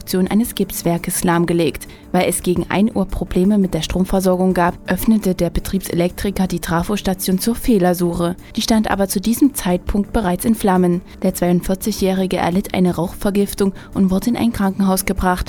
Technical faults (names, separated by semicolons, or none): none